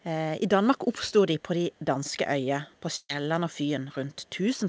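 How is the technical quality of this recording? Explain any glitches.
The speech has two kinds of glitch, heard through a wideband call path that fits G.722, with nothing above 8 kHz.

Echo leak, at 1.73 to 1.80 s, 2.74 to 2.80 s and 4.12 to 4.29 s: very faint delayed copies of the speech, lagging 236 ms, likely left behind by a loudspeaker echo canceller. Unlike a dropout, nothing is lost.

Burst of packet loss, 2.96 to 3.17 s: the last sound is held and fades for 130 ms, followed by 30 ms of silence. The speech then resumes with 120 ms missing, so content is skipped rather than repeated.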